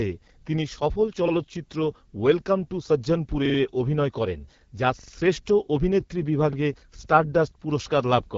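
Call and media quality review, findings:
AMR wideband (HD Voice) codec, whole clip: speech noticeably rough and raspy, nothing above 7.5 kHz. Rasp points to one of the two lowest AMR-WB rates, around 8.85 kbit/s, where the pulse-driven vocal tract model runs out of bits. Clearly audible.

Repeated buffer, 3.46–3.58 s and 4.99–5.12 s: short stutter, same roughly 43 ms chunk played four times with hard joins. Fits a 2048-sample buffer. Device replayed its last buffer when fresh audio arrived late. Little or nothing actually lost.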